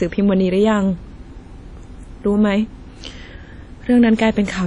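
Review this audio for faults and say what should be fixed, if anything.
Across the whole speech clip there's a washy, ringing smear with a hiss that swells and fades along with the talking, and that points pretty clearly to WMA compression. The transform codec has spread its quantisation noise over long blocks and zeroed the quieter detail, and the damage is plainly audible, which fits a bitrate down around 32 kbps. To avoid it, keep a lossless master and only export to a lossy format at a much higher bitrate.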